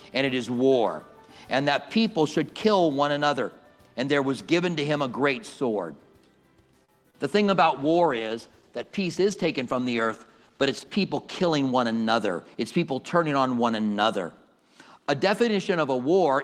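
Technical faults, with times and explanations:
6.85–6.90 s, short stall from a late packet: A packet arrived late and the jitter buffer ran dry, so the receiver held the last sound for about 31 ms and then resumed from exactly where it stopped. Nothing is lost, but that moment is stretched, with a faint buzz or dip where the extended sound sits. Playback afterwards runs about 31 ms later than before, since the held time was not recovered.
7.10–7.15 s, short concealed packet loss: About 20 ms of audio never reached the decoder in time, and the receiver covered the gap with roughly 27 ms of synthesised continuation. It extrapolates the preceding sound, following its pitch where it was tonal and using shaped noise where it was not, then crossfades back into the real signal. The result is a brief smear or wobble, and any very short sound in that gap can disappear.
7.49–11.59 s, call bitrate drop: The sender's bandwidth estimate fell and the Opus encoder was cut from 32 kbps to 15 kbps, staying at the lower rate for about 4.0 s. 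With fewer than half the bits, the encoder quantises the spectrum much more coarsely, so fine detail is lost and the sound turns rougher and watery. The quality recovers at around 11.6 s, when the bitrate is raised again.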